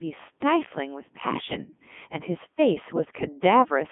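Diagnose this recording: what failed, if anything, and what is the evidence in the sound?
The failure is at the codec stage: the speech has been through a Codec 2 vocoder for its whole length, and the heavy damage fits the 3.2 kbit/s mode. The voice sounds robotic and buzzy because the decoder rebuilds it from sine waves driven by sent pitch, voicing and envelope, not the original waveform. A spectrogram shows unnaturally regular harmonic stripes confined to roughly 150 Hz to 3.5 kHz, with nothing above 3.7 kHz, and the waveform no longer matches natural speech shapes.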